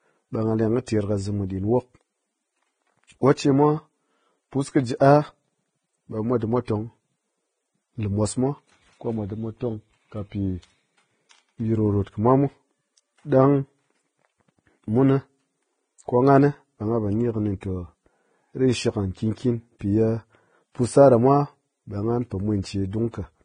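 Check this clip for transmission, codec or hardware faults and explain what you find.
There is one codec fault. Vorbis compression runs throughout: the speech has nothing above 9.7 kHz, and its treble is coarsely quantised into hissy, grainy noise with blurred consonant attacks. The heavy damage points to a low bitrate near 20 kbps and is likely Vorbis.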